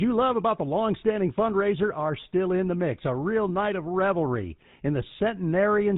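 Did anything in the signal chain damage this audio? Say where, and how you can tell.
Yes: the speech is buzzy and gravelly throughout, capped at 4 kHz. That is codec damage from the GSM full-rate codec, whose sparse pulse excitation, consistent with 13 kbps, roughens voices.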